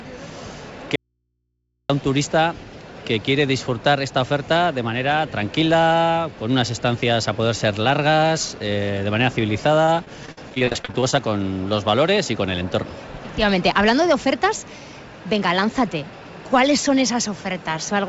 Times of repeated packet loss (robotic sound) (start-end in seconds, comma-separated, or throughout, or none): 9.85-11.18